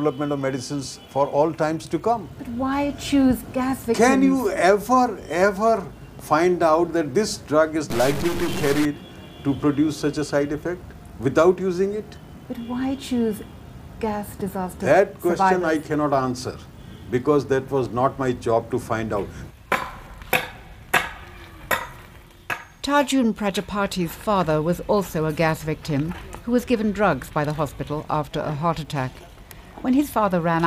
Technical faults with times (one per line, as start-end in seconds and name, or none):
7.90-8.85 stuck bit